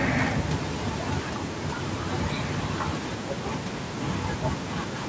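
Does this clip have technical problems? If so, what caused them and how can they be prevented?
No, nothing in this speech clip stood out as a technical problem on listening, so there is nothing to trace or prevent.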